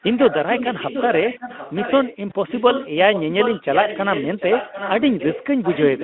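From 0.02 to 2.16 s a faint, delayed copy of the speech runs under the live talk about 745 ms late and about 10 dB quieter. This is an echo leak, most likely from a far-end loudspeaker whose echo canceller let part of the microphone pickup through. On a spectrogram it appears as a weaker duplicate of each harmonic pattern, shifted right by three quarters of a second. The echo returns from 2.48 to 2.89 s, 3.12 to 5.46 s, and 5.62 s to the end, with the same delay and level.

At 2.29 s, about 20 ms of audio is missing, which fits one lost packet of a 20 ms frame. The speech codec conceals the gap with VoIP packet loss concealment, extrapolating from the last frame's pitch and spectral shape while lowering the gain. The result is a brief buzzy smear that settles over roughly 40 ms. In the waveform the envelope dips and flattens there, and on a spectrogram the harmonics hold steady and fade instead of following the speech. 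Through all of this the Speex coding, limited to roughly 200 Hz to 3.6 kHz, adds at most faint damage of its own.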